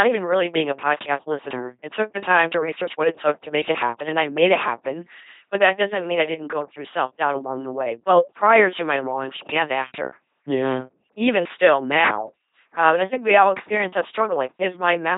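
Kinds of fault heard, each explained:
LPC-10 vocoder: the speech is rebuilt from buzz or hiss through a simple filter, so it sounds robotic throughout, with nothing above 3.8 kHz, unlike band-limiting, which only muffles.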